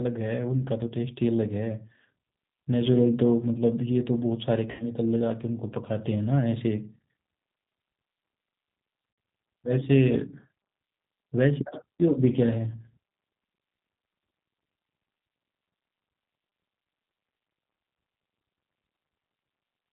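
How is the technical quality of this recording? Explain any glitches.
The recording is clearly degraded, with constant codec roughness and two short dropouts.

G.729 codec: The whole clip runs through a low-rate speech coder, consistent with 8 kbit/s G.729. It discards everything above 4 kHz and leaves the voice rough and synthetic.

VoIP packet loss concealed by the speech codec: At 4.71–4.85 s and 9.13–9.18 s, lost packets made the decoder extrapolate. The sound smears and fades, then recovers weakly.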